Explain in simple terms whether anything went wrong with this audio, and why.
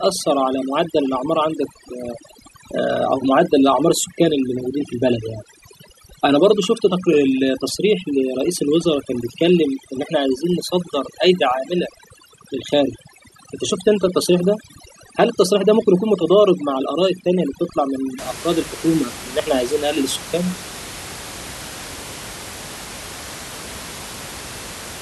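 From the start to about 18.2 seconds, the speech has overdone noise removal. A cleanup tool was set too strong. It stripped away quiet parts of the voice along with the room noise. The background breaks up into twinkling specks in the pauses.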